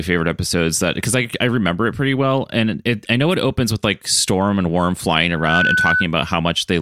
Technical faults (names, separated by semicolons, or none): loudspeaker feedback squeal